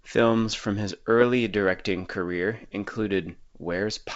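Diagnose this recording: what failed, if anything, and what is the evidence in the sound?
A brief pop with a rough, crackling burst and a momentary change in level breaks into the speech from 0.53 to 0.57 s. This is bit errors on an ADPCM link, at a low rate of around a few tenths of a percent, in the transmission stage of what sounds like a G.722 wideband path in its 64 kbit/s mode. Each flipped bit throws off the decoder's step size and predictor, so the damage rings on for some milliseconds, spread over what points to a few consecutive frames.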